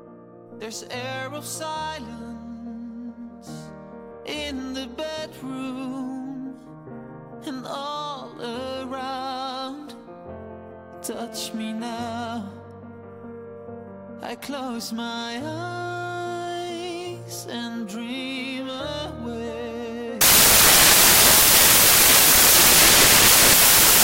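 The audio turns into samples built from the wrong bytes from 20.21 s to the end at 24.03 s, heard as loud, harsh broadband noise. The reader misassembles each sample, so rapidly varying low bits dominate. A spectrogram shows flat broadband energy, and the waveform becomes dense hash.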